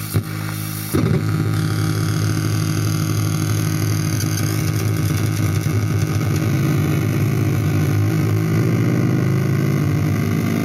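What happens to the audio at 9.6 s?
At 9.6 s the audio plays through intact, with no dropout, click, distortion or other fault at that moment.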